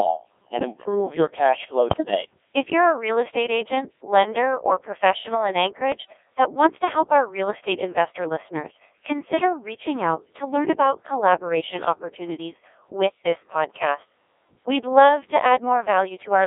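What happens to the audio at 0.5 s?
At 0.5 s you're hearing the Codec 2 vocoder, and it isn't a one-off. It runs through the whole clip. The decoder rebuilds the speech from sine waves, using only pitch, voicing, energy and a rough spectral envelope, so the original waveform is gone. The result is heavily robotic and buzzy. It's squeezed into a phone-like band of roughly 300 Hz to 3.6 kHz, and it runs at a very low rate of around 1.6 kbit/s.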